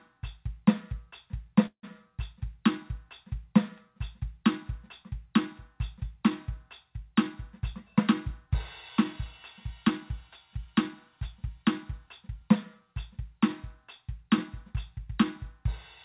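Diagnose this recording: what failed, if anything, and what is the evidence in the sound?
Call audio freeze at the call-processing and network stage, 1.66 to 1.85 s: the music stops and the last sound is stretched into a fading fill, with about 80 ms of silence inside a 170 ms insertion. It resumes where it left off, nothing lost, but 170 ms later. Delayed packets draining the jitter buffer are the likely cause.

Jitter buffer speed-up at the buffer stage, 10.65 to 12.79 s: the music plays at 104% speed with its pitch unchanged, so the tempo briefly pushes ahead. The receiver trimmed repeated pitch-period slices, roughly a tenth of a second in total, to work off the delay built up earlier. The whole clip also stops at 4 kHz, consistent with a G.711 call path.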